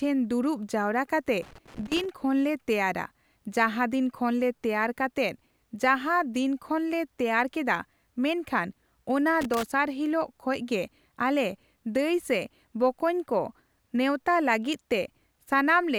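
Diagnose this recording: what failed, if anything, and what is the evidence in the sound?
Loose connector crackle, from 1.42 to 2.10 s and again from 9.41 to 9.63 s, points to a failure in the analogue wiring ahead of the converter. Both bursts are irregular scratching and crackle over the speech. A worn or dirty contact in a plug or socket is making and breaking as the cable shifts. Each break chops the signal, and any DC sitting on the line turns those interruptions into clicks and pops.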